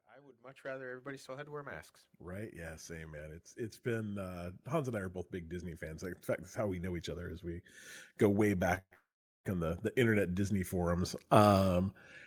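Speech, with the level creeping upward in two stretches from automatic gain rising. From 0.05 to 7.48 s the speech and the background swell together by about 14 dB. This is the signature of an AGC that judged its input too quiet and slowly raised its gain. A second, smaller rise of about 6 dB runs from 8.19 to 11.92 s, again lifting the noise floor along with the speech.

Inside that second rise, a short stall from a late packet occurs at 8.75 to 8.79 s. A packet missed its playout time and the jitter buffer drained, so the receiver held the last sound for roughly 22 ms before resuming at the same point. Nothing is lost, but a sound lingers slightly too long, which adds 22 ms of delay.

The stall runs straight into a call audio freeze. From 8.79 to 8.93 s the last sound is drawn out for about 127 ms and ends in roughly 60 ms of silence. A longer hold follows from 8.93 to 9.46 s: about 511 ms of extended sound fading into around 420 ms of silence. 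Playback then carries on where it stopped, with no content dropped. Together these events push the audio about 0.66 s later. The likely cause is packets held up in transit, leaving the jitter buffer empty.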